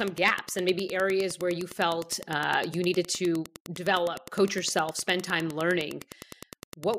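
Wi-Fi interference runs through the whole speech clip, from start to finish. A nearby Wi-Fi radio's beacon, repeating every 102.4 ms, is being picked up and rectified by the audio circuit, so each transmission lands in the signal as a small click. The result is a steady ticking at nearly ten per second, sitting roughly 20 dB below the speech.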